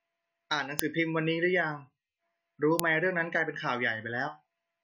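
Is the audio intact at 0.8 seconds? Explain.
No. A file header played as audio occurs at 0.79 s. Here separate pieces of the speech stream were joined without their WAV headers being stripped, so a few dozen bytes of file metadata were read as if they were samples. Those bytes bear no relation to the waveform around them, so they come out as a sharp, loud click or snap lasting about a millisecond, cutting across the speech at the point where one piece begins.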